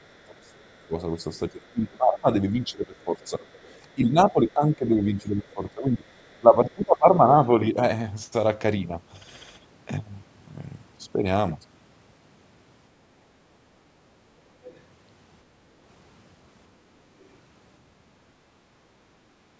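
From 0.06 to 1.97 s, and again at 3.44–3.73 s and 6.29–6.98 s, a faint second voice sits about 35 dB under the speech. This is the other side's voice leaking through, likely loudspeaker playback that the echo canceller failed to subtract. It adds a voice rather than removing one.

Overlapping this, from 0.11 to 7.33 s, the main talker's speech is suppressed in double talk for about 5 s in total, dipping by up to about 25 dB. The canceller likely mistook the talker for echo while both spoke. This takes away the talker's own level, unlike leakage, which adds an extra voice.

Two brief leaks follow. At 14.64–14.8 s the other side's voice comes through more strongly, about 25 dB down. At 17.2–17.28 s a short scrap sits around 40 dB down.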